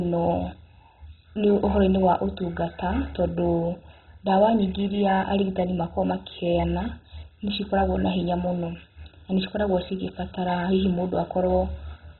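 Speech that sounds dull and muffled from start to finish, with nothing audible above about 4 kHz and a gurgling, granular roughness as upper bands seem to drop in and out. The likely cause is heavy MP2 compression: the MPEG Layer II encoder, starved of bits, which fits a very low rate around 16 kbps, shut off its upper sub-bands and coarsely quantised the ones it kept.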